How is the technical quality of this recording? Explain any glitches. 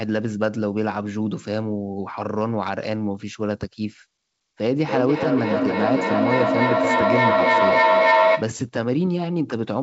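The recording has one clear fault, a feedback howl, on top of a call-band signal with nothing above 8 kHz, which fits a wideband call codec such as G.722.

Feedback howl, 4.85 to 8.66 s: a second device in the room was on the call, so each loudspeaker-to-microphone trip added gain. The repeats build into a tone around 700 Hz, peaking about 6 dB above the speech, with a loop delay of roughly 300 ms. On a spectrogram it shows as a bright horizontal line near 700 Hz. On the waveform it appears as a swelling envelope.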